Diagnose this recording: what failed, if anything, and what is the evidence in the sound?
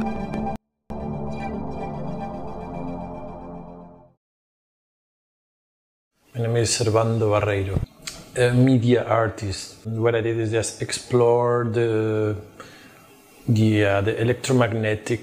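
A 24-bit alignment error at the sample-format conversion stage: 24-bit samples sitting in the low bytes of 32-bit words were read as full 32-bit integers. From 0.56 to 0.90 s the sound stays clean but drops by about 48 dB, becoming almost inaudible, then returns.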